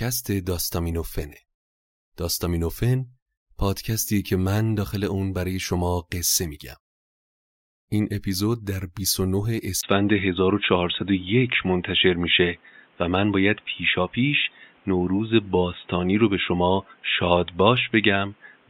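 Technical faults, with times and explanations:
9.81–18.70 s, input switched to a poorer device: recording likely moved to a narrower-band microphone. After a 20 ms gap, the speech turns dull with nothing above 3.8 kHz, shifts in level by around 5 dB, and carries a new faint noise floor.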